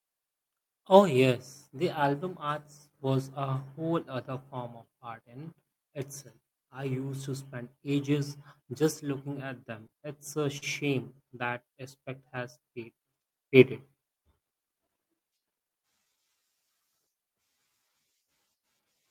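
Repeated stalls (stutter) run from 9.87 to 10.64 s. Packets arrived late or slower than playback consumed them, so the jitter buffer ran dry four times. Each time the receiver stretched the last sound to cover the wait, filling 82 ms in total, the longest hold 42 ms, about 11% of that stretch. No speech is lost, but it drags and catches, with small stuttering hesitations rather than clean dropouts.

Scattered short gaps appear between 11.32 and 12.39 s. A handful of isolated packets, around four, went missing or arrived too late, each on its own. The receiver bridged every hole by continuing the preceding sound, around 30 ms of patching in all, none longer than several milliseconds, roughly 3% of the span. The speech stays clear, with only ticks and brief smeared hiccups where the patches sit.

A jitter buffer slow-down overlaps this, from 11.50 to 13.51 s. With the buffer running low or its target delay just raised, the receiver rebuilt its reserve by repeating single pitch periods and slivers of pauses many times over, adding 111 ms. 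Playback runs at 95% speed with the pitch unchanged, so syllables and pauses sound slightly drawn out.

A jitter buffer speed-up follows from 15.46 to 16.13 s. Here the buffer held more audio than its target, and to trim the excess delay the receiver cut out short pieces of one or a few pitch periods in quick succession, removing around 100 ms. The speech plays at 114% speed while keeping its pitch, so this passage sounds noticeably hurried and clipped compared with the delivery around it.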